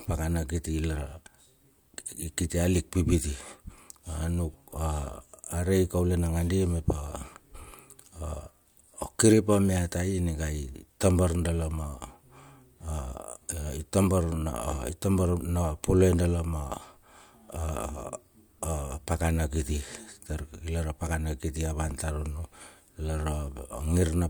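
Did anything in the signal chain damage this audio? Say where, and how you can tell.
No, nothing along the signal chain has left any audible damage on this speech recording.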